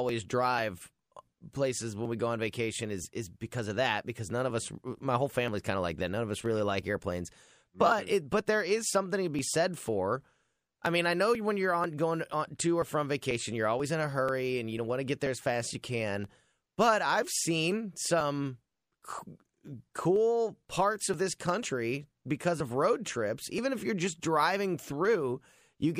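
From about 0.09 s to 25.54 s the speech is peppered with periodic USB or driver dropouts, a regular tick roughly every 0.49 s, around fifty in all. Something on the bus or in the driver is stalling at a fixed interval and each time about 10 ms of audio just gets skipped, so the waveform jumps and you hear a little click. The ticks only show up while there's signal, which is what gives the game away.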